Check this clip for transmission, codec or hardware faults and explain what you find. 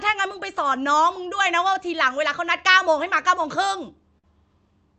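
Yes, a few timing faults show up in this speech clip, all tied to delivery over the Opus call path, whose top end stops around 8 kHz.

Clock drift between sender and receiver runs throughout. The sender's clock seems roughly 5% slow, so the receiver's buffer keeps draining and needs constant small fixes.

Scattered short gaps appear between 0.03 and 0.73 s. There are about four tiny holes, the longest around 7 ms, patched by extending the last sound, so you get brief ticks or smears.

Repeated timing corrections run from 0.16 to 3.93 s. The receiver stretches the audio to about 96% speed, adding roughly 150 ms, which at most shows up as slight hiccups or a slightly unsteady tempo.

A short stall from a late packet hits at 4.18 to 4.26 s. The buffer ran dry, so 52 ms of sound is held too long, giving a brief hang with a slight buzz or dip before the audio resumes.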